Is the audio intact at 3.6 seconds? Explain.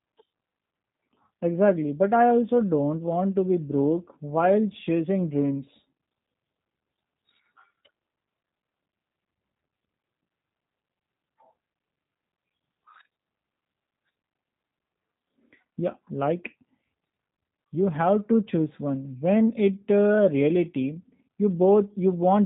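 No. Throughout the recording, including 3.6 s, G.729 codec coding rebuilds speech from a filter, pitch predictor and sparse pulses. Nothing above 3.8 kHz survives, leaving speech audibly rough and synthetic, consistent with an 8 kbit/s stream.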